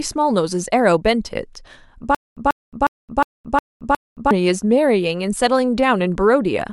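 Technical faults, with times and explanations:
2.15 to 4.31 s, stutter with silent gaps: a 140 ms burst of speech repeats six times, each followed by about 220 ms of digital silence, so it recurs every 360 ms. Unlike a plain loop, the dead gaps point to a likely playback stall, with the intervening audio lost.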